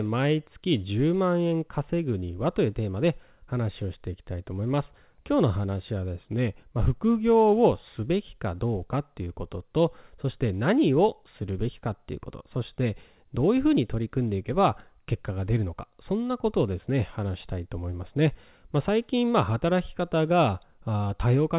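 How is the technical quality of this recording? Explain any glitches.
No glitches can be heard in this speech recording.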